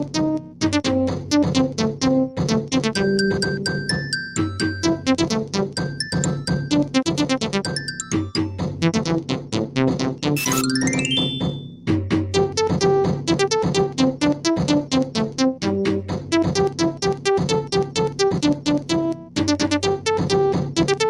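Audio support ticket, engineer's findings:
Noise suppressor applied to music or sounds, throughout. Speech-tuned suppressor left active, treating steady tones, ambience and tails as noise. Gain swings by around 10 dB, so the sound pumps and thins while attacks pass. Suspect denoise stage enabled on a non-speech path.

Sound cut by the noise suppressor at 0.04–0.61 s, 1.2–2.72 s, 4.97–5.99 s, 8.7–10.25 s, 11.52–11.88 s and 13.89–19.36 s. Sustained or decaying material is pulled down by about 7 dB at worst, and tails are cut short. The longest affected stretch is 13.89–19.36 s.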